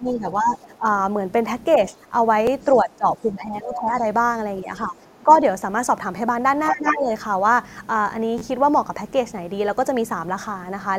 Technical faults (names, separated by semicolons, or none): speech suppressed in double talk; other side's voice leaking through; repeated buffer